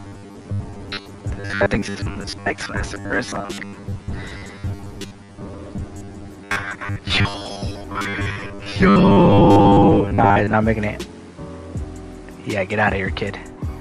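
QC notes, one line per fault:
0.01–10.54 s, robotic sound from repeated short buffers: the sound turns into a rigid, metallic buzz fixed at 100 Hz that still loosely tracks the original contour. The likely cause is new audio arriving too seldom, so the last chunk, about 10 ms, is looped to fill the gap while roughly half the real audio is skipped. The steady 100 Hz drone, rather than silent gaps or clicks, separates this from plain dropouts.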